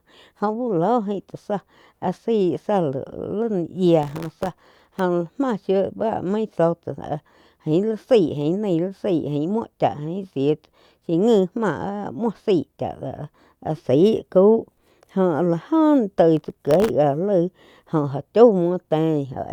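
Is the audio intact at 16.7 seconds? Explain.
No. From 16.37 to 16.90 s, processor overload crackle: dozens of sub-millisecond buffers miss their deadline and drop to silence, producing gritty tearing over the speech.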